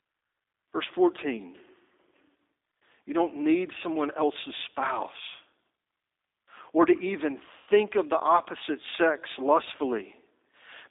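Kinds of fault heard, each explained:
G.729 codec: This 8 kbit/s speech coder rebuilds each frame from a filter, pitch predictor and sparse pulses, so the speech sounds plainly rough and synthetic, confined to a band of about 200 Hz to 3.7 kHz. A spectrogram shows nothing above 3.7 kHz and smeared, pulse-like harmonics.
VoIP packet loss concealed by the speech codec: About 90 ms of audio, which fits three lost packets, disappears between "or to even" and "of the opposite sex", from 7.58 to 7.70 s. The decoder stretches the last frame into a buzzy tone or coloured noise that fades. The waveform shows a decaying repetitive stretch.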